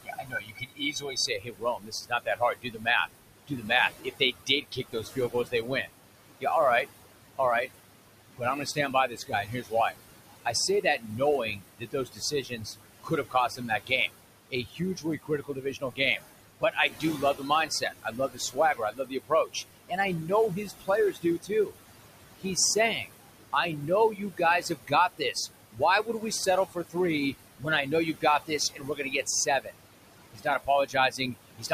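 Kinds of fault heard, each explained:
noise suppressor artifacts: The suppressor works band by band, frame by frame, turning down whatever it judges to be steady noise, here by about 20 dB, and it does this throughout the clip. The room noise, sitting about 10 dB under the speech, drops away in the gaps between words and then comes back up underneath them whenever speech starts, so the background seems to pump in and out with the talking.
speech cut by the noise suppressor: Here the suppressor mistook parts of the speech itself for noise and pulled them down along with the background. It happens across three long stretches, 0.03 to 7.4 s, 8.27 to 21.78 s and 22.39 to 31.72 s, with the deepest dips reaching about 21 to 22 dB. Roughly 3 s, 5 s and 3 s of speech are affected in those stretches, and the affected parts sound swallowed or faint.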